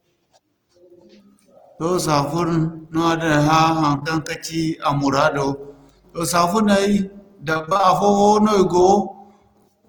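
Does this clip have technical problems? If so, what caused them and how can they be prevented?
Yes. Two kinds of network fault are audible.

Short concealed packet loss occurs three times in a row, at 3.95 to 3.99 s, 3.99 to 4.03 s and 4.03 to 4.07 s, just before "ka ci a". Each time about 20 ms of audio failed to arrive, and the decoder extended the preceding sound to cover the hole before blending back. Each produces a brief smear or wobble rather than a run of chopped fragments, which separates it from the robotic stretch later. Forward error correction or a slightly deeper jitter buffer would let these short losses be recovered rather than guessed.

Repeated packet loss (robotic sound) spans 7.53 to 7.85 s. Eight separate gaps, none longer than about 21 ms, add up to about 160 ms lost, so roughly half of that span is concealment. Because each patch is followed almost at once by the next, the sound turns choppy instead of briefly blurred. 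A more stable connection, such as wired rather than congested wireless, together with an adaptive jitter buffer, would prevent these bursts.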